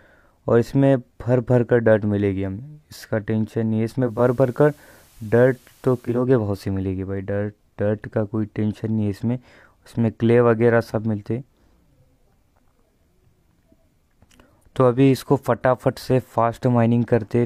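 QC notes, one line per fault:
4.01–6.28 s: digital radio blending to analogue FM. Quarter-second cross-fades each way bring in hiss about 35 dB down at unchanged level, with no silent gap as in a dropout.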